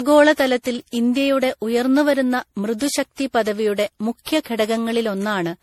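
Generation loss runs throughout the speech, from start to finish: a swirly, hollow, smeared quality with blurred consonant attacks and nothing above about 18.1 kHz. The likely cause is repeated MP3 re-encoding at around 64 kbit/s, perhaps seven passes, each re-quantising on a shifted frame grid and compounding the damage.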